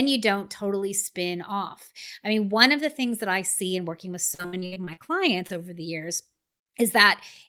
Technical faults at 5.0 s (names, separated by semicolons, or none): repeated packet loss (robotic sound)